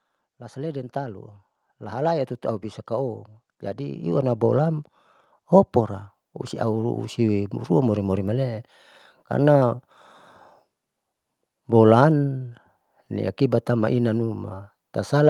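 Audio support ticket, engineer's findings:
Automatic gain rising, 0.37 to 8.67 s: level of speech and background climbs together by about 16 dB. AGC judged input too quiet, ramped gain slowly. Call-codec path audible as top end ending near 12 kHz.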